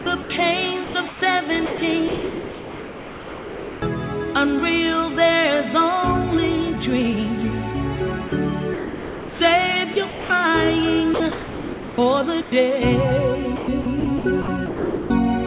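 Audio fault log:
0.0–0.3, 0.84–3.82, 8.28–9.4, 9.94–10.3, 11.14–12.52 and 13.56–15.47 s: sound chopped by the voice detector. Segments of 140 ms to 2.1 s are replaced by synthetic comfort noise, likely from the sender's detector toggling transmission. The sound cuts in and out, and the call audio stops at 4 kHz.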